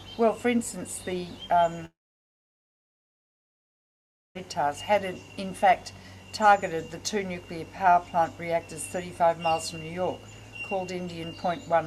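At 1.85 s the audio breaks into a short, fading buzz that dies away almost at once, leaving about 2.4 s of silence before sound returns at 4.37 s, picking up further along with roughly 2.5 s of material simply gone. This is most likely a long network dropout: the stream stopped arriving, the receiver briefly stretched the last sound to cover the gap, then gave up and played silence until packets resumed.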